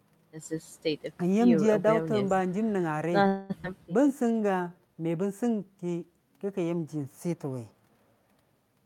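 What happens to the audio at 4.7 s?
At 4.7 s the speech is inside a jitter buffer slow-down running from about 4.02 to 4.95 s. With its reserve running low or its target delay just raised, the receiver repeated individual pitch periods and fragments of pauses to build up delay, adding 135 ms and playing that stretch at 86% speed. Sounds are drawn out, yet the pitch stays put, which distinguishes it from a clock or sample-rate slip, where the pitch would drop along with the tempo.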